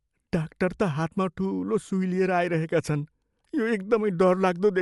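Throughout the speech, the sound is dull, with nothing above 11.5 kHz. A rough, fluttering noise clings to the sound. The likely cause is Dolby Digital compression. The encoder narrowed the band and starved many frequency lines of bits, which fits a bitrate near 64 kbps.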